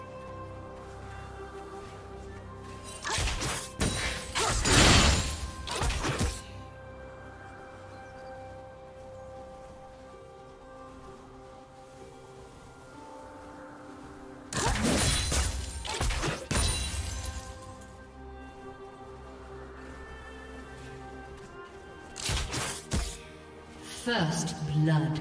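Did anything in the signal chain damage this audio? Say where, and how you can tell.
No, nothing in the signal chain damaged this audio.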